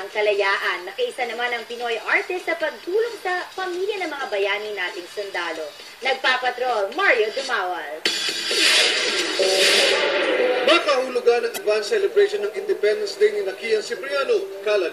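At 11.54 s a brief glitch cuts through the sound for about 46 ms, ending at 11.58 s. This is damaged data in a compressed stream: corrupted bytes made the decoder misread those frames and lose sync until it found the next frame header.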